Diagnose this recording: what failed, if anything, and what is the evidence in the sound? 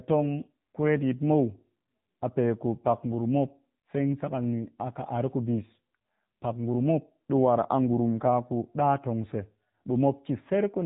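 Thin, boxed-in speech with a buzzy, synthetic edge runs through the whole recording, and nothing above about 3.8 kHz survives. The failure is at the codec stage: the AMR narrowband mobile codec (AMR-NB). It samples at 8 kHz and rebuilds the voice from a vocal-tract model excited by a few pulses per 5 ms subframe. The plainly audible damage fits a low mode around 7.4 kbps, where too few bits leave the synthesis sounding coarse.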